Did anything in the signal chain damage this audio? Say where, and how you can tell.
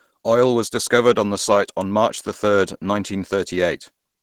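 Yes. The damage sits at the codec stage and runs through the whole clip: the speech sounds hoarse and grainy, with a rough noisy texture on voiced sounds, yet the top end stays present rather than cut off. That pattern is most likely Opus compression in its hybrid speech mode at a low rate, fitting roughly 16 kbps. Bands are filled with noise instead of dropped, so there is less of MP3's swirling, holey, watery sound.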